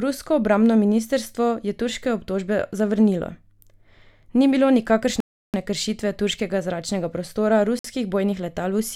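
At 5.20 s the speech drops to silence for about a third of a second, picking up again at "kršitve turškega zračnega prostora", and after that phrase there's a shorter 53 ms gap at 7.79 s. Both sound like a Bluetooth stall, likely radio interference starving the headphone buffer until resent packets arrive.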